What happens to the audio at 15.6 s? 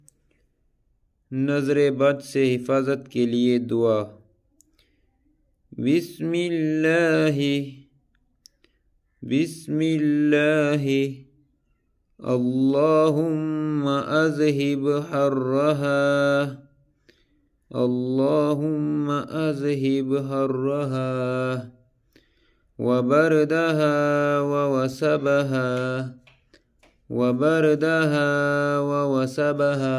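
Nothing goes wrong at 15.6 s: the audio carries straight through that moment without any dropout, click, glitch or other audible fault.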